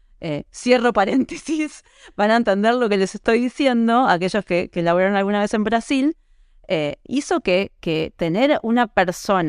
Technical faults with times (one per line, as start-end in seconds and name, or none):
7.59-9.49 imaging from linear upsampling